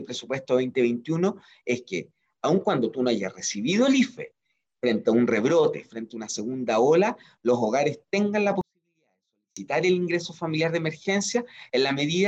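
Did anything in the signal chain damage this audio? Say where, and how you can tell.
Yes, a 24-bit alignment error in the sample-format conversion. From 8.61 to 9.57 s the sound stays clean but drops about 48 dB at once, nearly inaudible. The 24-bit samples sat in the low bytes of 32-bit words and were read as full 32-bit integers.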